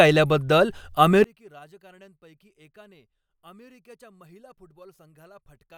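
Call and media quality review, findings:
From 1.24 s to the end, speech nearly vanishes on mono playback. Level drops by about 32 dB, leaving a faint residue. Likely cause: one channel inverted. Near-identical left and right cancel when summed, and only their small difference survives.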